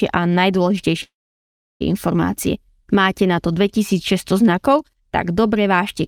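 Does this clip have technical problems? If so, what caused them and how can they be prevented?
Yes, there is a call audio freeze from 1.03 to 1.82 s. Packets were likely held up in transit, so the jitter buffer ran empty and the receiver had nothing new to play. It stretched the last sound briefly before it faded, leaving about 0.71 s of silence. The speech then resumes where it stopped, pushed about 0.77 s later, with nothing lost. Prevention calls for a steadier network path or a deeper adaptive jitter buffer.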